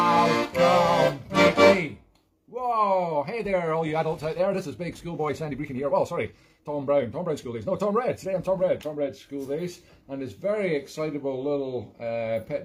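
From 3.04 s to 9.32 s the audio runs through a time-stretched section, played about 1.41 times faster while its pitch stays put. The pace jumps abruptly at both edges, and the sped-up stretch sounds rushed, likely from software squeezing that span to fit a length by dropping short pieces. On a waveform the span looks compressed, with tiny splice seams; on a spectrogram, harmonic bands keep their height but events crowd closer together.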